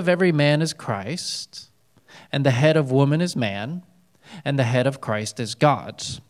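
Nothing technically wrong can be heard in this speech recording, which holds a steady, continuous signal with no audible faults from beginning to end.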